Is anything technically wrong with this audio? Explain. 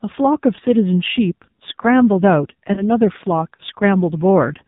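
Yes. The AMR narrowband mobile codec affects the whole speech clip. It samples at 8 kHz and rebuilds the voice from a vocal-tract model driven by sparse pulses, so nothing above 4 kHz survives. The heavy buzzy, synthetic coloration fits a low rate around 5.9 kbps.

Lost AMR speech frames occur at 0.56–0.60 s and 2.74–2.85 s. Each sounds like a single 20 ms frame that failed its checksum. The decoder filled the gap by repeating the previous pitch and vocal-tract settings at reduced gain, giving a brief dip or warble before the voice recovers weak or rough for a moment.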